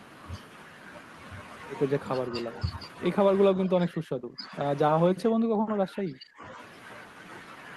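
From 3.54 to 4.55 s, and again from 5.1 to 6.6 s, the speech sinks by up to about 25 dB. This is speech suppressed in double talk, likely the echo canceller failing to separate the talker from the overlapping far-end echo and attenuating both.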